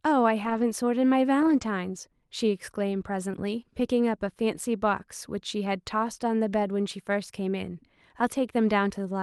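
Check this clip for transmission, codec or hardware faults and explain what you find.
Two kinds of packet-loss damage are audible in this speech, carried over what sounds like an Opus call path limited to about 12 kHz.

Lost packets rebuilt from error correction: at 0.45–0.63 s, 1.41–1.63 s, 3.33–3.35 s and 4.55–4.57 s the sound turns briefly rougher and noisier without any gap. Packets went missing, and the decoder played the low-bitrate backup copies carried in the following packets. The first two stretches, 100 ms and 120 ms of rebuilt audio, fit runs of five and six 20 ms frames.

Short concealed packet loss: at 3.31–3.35 s there is a quick smear or wobble lasting a few hundredths of a second. About 20 ms arrived too late, so the receiver extended the preceding sound to fill the hole and then blended back into the real signal as backup data took over.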